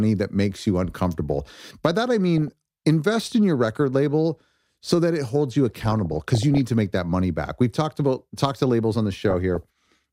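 Speech with DAB burbling in four spots: 0.54 to 0.60 s just before "you uncomfortable", 2.38 to 2.48 s between "that I" and "invest in your record", a longer stretch from 5.75 to 6.57 s, and 9.20 to 9.65 s right after "to labels on the". Weak reception lets a fraction of a percent of bit errors slip past error correction into the MP2 data. Short blips of noise land in single sub-bands over the voice.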